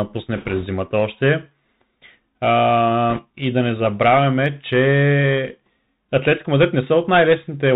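Throughout the speech, the band-limited, plainly gritty quality points to a Bluetooth CVSD headset codec, which fits a 64 kbps CVSD link. The coder sends only one bit per sample, stepping up or down with an adapting step size, so everything above 4 kHz is gone. Fast, loud high-frequency energy outruns the step, making s sounds scratchy, and a fine granular hiss sits under the speech. Unlike ordinary low-pass filtering, the damage is grainy rather than merely dull.

From 0.35 to 0.67 s, and again from 3.10 to 3.23 s, bit errors on a Bluetooth voice link add a rushing, crackly noise over the speech. The later burst is harsher, fitting an error rate of around 3 percent against roughly 1.5 percent earlier. Because each CVSD bit carries the same small weight and its effect fades quickly, flipped bits produce a spread-out roughness rather than the sharp, loud clicks or dropouts of packet loss in frame-based codecs.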